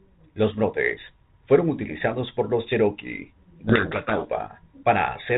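Speech carried over G.726 ADPCM, its light coding hiss and cutoff near 4 kHz fitting the 32 kbit/s rate. From 3.64 to 4.30 s a codec payload misread occurs: the G.726 code words arrive with their bit order reversed, so the decoder's difference values are wrong and the speech drowns in harsh, rasping distortion. On a spectrogram that span fills with dense broadband noise up to 4 kHz, and the waveform turns jagged and spiky until normal decoding resumes.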